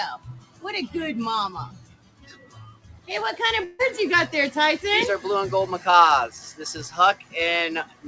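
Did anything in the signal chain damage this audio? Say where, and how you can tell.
Yes. At the call-processing stage, a speech noise suppressor left on for this audio makes the level pump by roughly 15 dB throughout, a swing that codec coding noise would not produce.

Sound cut by the noise suppressor appears at 0.17–0.65, 1.66–3.1, 6.31–6.60, 7.14–7.35 and 7.84–8.07 s, dipping up to about 16 dB. The sound continues through each dip, only quieter, so nothing is actually missing.

In the network stage, 3.64–3.81 s is replaced by a fading continuation of the preceding sound, likely a long network dropout. Unlike a suppressor dip, the original audio there is gone rather than turned down.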